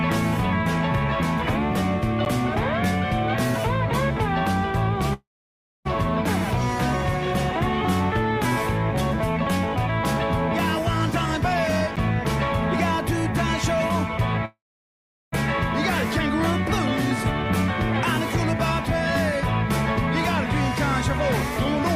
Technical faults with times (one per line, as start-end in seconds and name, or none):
2.25 block of digital silence
5.13-5.87 call audio freeze
11.96 block of digital silence
14.45-15.34 call audio freeze